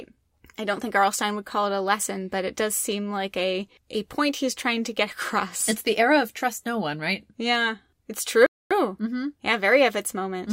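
At 8.46 s the player exhausted its downloaded audio and halted playback until more data arrived: a rebuffering stall. The speech drops to silence until 8.71 s, adding about 0.24 s of dead air, then picks up exactly where it stopped, with nothing lost.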